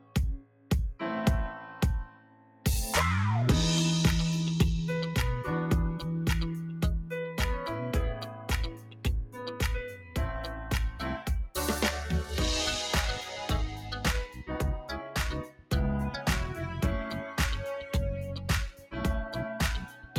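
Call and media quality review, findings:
Noise suppressor applied to music or sounds, whole clip: a speech-tuned suppressor is treating steady parts and tails as noise. The level pumps by roughly 10 dB, with attacks passing and sustained sound sinking. Worth switching it off for this content.

Sound cut by the noise suppressor: dips of up to about 14 dB at 0.0–0.7 s, 2.07–2.66 s, 7.03–7.4 s, 8.21–9.38 s, 9.91–11.3 s, 13.72–15.72 s, 18.72–18.96 s and 19.8 s to the end. Held sound and decays get chopped short, worst around 13.7–15.7 s.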